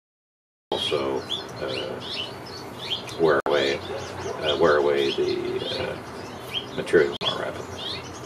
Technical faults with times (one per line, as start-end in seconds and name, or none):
0.00-0.72 cut-off start
3.40-3.47 Bluetooth dropout
7.16-7.23 Bluetooth dropout